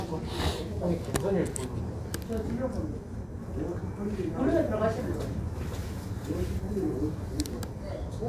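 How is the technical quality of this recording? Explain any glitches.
No glitches or technical faults are audible anywhere in the recording.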